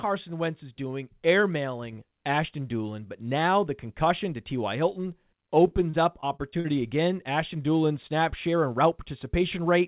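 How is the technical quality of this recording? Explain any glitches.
The recording has one glitch, heard over narrowband call audio with nothing above 4 kHz, which fits G.711 mu-law.

Repeated packet loss (robotic sound), 5.68 to 6.66 s: audio packets went missing six times in under a second, each hole up to 40 ms. The receiver bridged each by stretching the preceding sound, covering about 17% of that stretch, so the speech turns choppy and briefly robotic.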